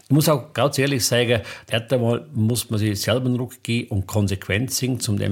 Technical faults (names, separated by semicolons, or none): clock drift buffer slips